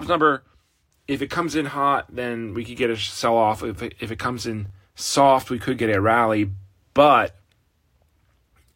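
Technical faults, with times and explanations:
4.68 to 4.70 s, chunks out of order: just after "if it comes in" and before "soft we could get", a 10 ms slice of speech plays one chunk late, swapped with the slice that should follow it. Nothing is missing, but the three hard joins produce a tiny jumbled stumble. On the waveform, the splices show as abrupt steps in amplitude and phase. On the spectrogram, there is a brief discontinuity in the harmonic traces at the joins.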